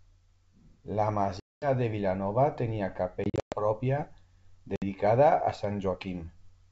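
Packet loss on an ADPCM call cuts hard-edged silent gaps at 1.40–1.68 s, 3.24–3.61 s (several dropouts, longest 120 ms) and 4.76–4.83 s. These show as blank vertical bands in the spectrogram and flat waveform sections. The decoder's predictor loses sync, so speech resumes with brief distortion.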